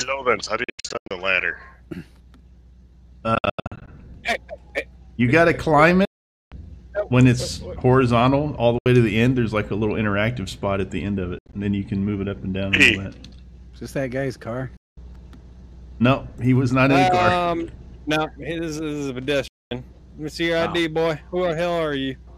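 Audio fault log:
0.64–1.11 s, 3.35–3.88 s, 6.05–6.52 s, 8.78–8.86 s, 11.39–11.53 s, 14.77–14.97 s, 19.48–19.71 s: Bluetooth dropout. Sound cuts to silence, in broken runs within the first, second and fifth events and as single holes elsewhere. It then resumes further on, likely from wireless packets arriving too late. The waveform shows flat gaps, and the spectrogram shows blank vertical bands.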